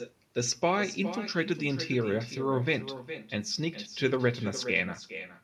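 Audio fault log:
throughout, echo with no canceller: every phrase is followed roughly 400 ms later by a copy about 12 dB down and thinner, because the far end's loudspeaker output reaches its microphone and returns across the network with nothing subtracting it.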